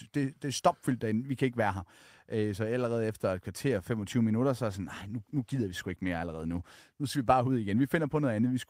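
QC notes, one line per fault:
4.72–7.69 s, call bitrate drop: just after "minutter så er", the call's bandwidth estimate fell and the encoder was pushed from 32 to 18 kbps, staying at its lowest for about 2.1 s. Coarser coding turns the speech rough and watery until the bitrate recovers.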